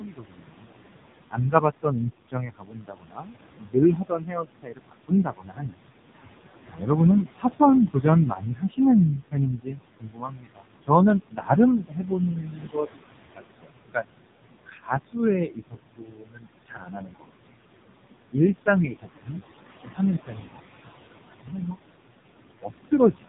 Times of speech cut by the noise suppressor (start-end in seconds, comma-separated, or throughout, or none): 0.00-0.69, 1.31-14.06, 18.32-20.59, 21.42-21.76